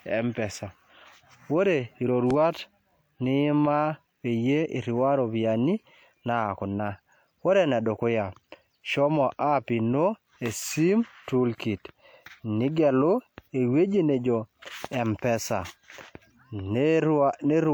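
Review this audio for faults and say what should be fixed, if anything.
Two loud pops stand out in this speech, one from 2.31 to 2.33 s and another from 14.85 to 14.87 s. Each is a single sharp hit, only a couple of hundredths of a second long, landing roughly 10 dB above the speech while the talking carries on underneath. That's likely a voltage spike getting into the chain, from a connector being seated, a switch flipping or a static discharge, which the downstream circuitry turns into a click. Checking cables and switches before rolling, and keeping everything grounded, should stop these from happening.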